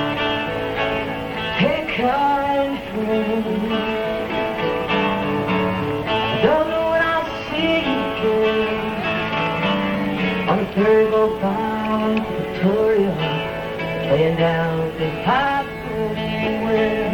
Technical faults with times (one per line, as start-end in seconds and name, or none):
0.00-17.13 MP3 compression